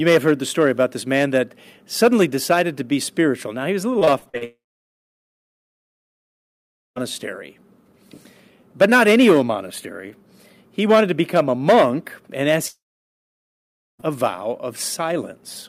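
Repeated packet loss hits the audio from 3.99 to 4.43 s: short holes, none over about 40 ms, are patched by stretching the previous sound, leaving a choppy, robotic stutter. Two long network dropouts likely follow, at 4.45 to 6.98 s and 12.68 to 14.05 s. In each, the sound gives way to a briefly fading buzz, then near-silence, before resuming with that stretch missing.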